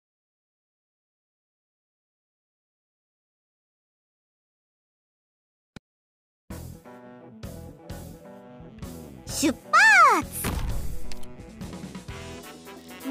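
No technical faults can be heard anywhere in the audio, and the signal holds steady without any audible disruption.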